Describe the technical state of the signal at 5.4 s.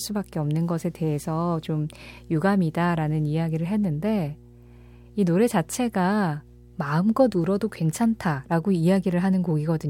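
Mains hum is present at 5.4 s, as it is across the entire clip. Power-line energy leaks into the signal, likely through a ground loop or a nearby transformer, leaving a steady 60 Hz drone with low harmonics, sitting roughly 25 dB beneath the speech.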